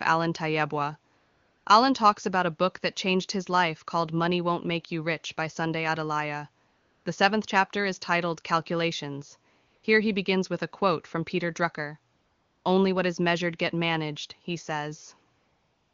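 The phone's voice detection judged the talker silent and stopped sending speech frames, so the receiver synthesised AMR comfort noise instead at 1.17–1.65, 6.67–7.05, 9.67–9.83 (just before "he begins with a"), 12.15–12.65 and 15.37 s to the end. Each gap becomes a steady, smooth hiss that switches in and out in place of the real background.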